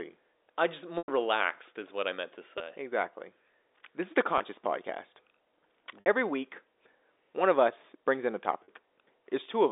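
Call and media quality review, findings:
Packet loss with pitch repetition, receiver concealment: 0.98–1.08 s after "I just", before "relaxed is what I"; 2.58–2.60 s after "what I meant to"; 4.38–4.40 s after "is the"; 6.00–6.06 s; 8.65–8.68 s. Gaps of 100, 20, 20, 60 and 40 ms, fitting 20 ms packets. The last pitch period is looped into a held, buzzy tone that fades toward silence, unlike a hard dropout's click. The band-limited G.711 line itself is clean.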